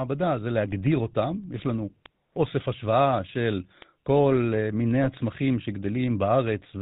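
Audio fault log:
Throughout: GSM full-rate codec. Band-limited below 4 kHz with a buzzy, gravelly roughness from pulse-train excitation, which fits a 13 kbps vocal-tract model coding.
5.04–5.08 s: GSM bit errors. A brief squawk and gargle as corrupted filter, pitch and gain values distort the spectrum and level, which fits roughly 1% bit errors.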